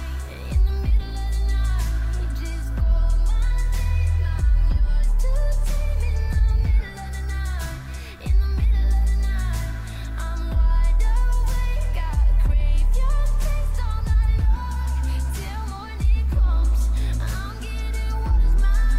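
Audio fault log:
No faults found anywhere in the audio.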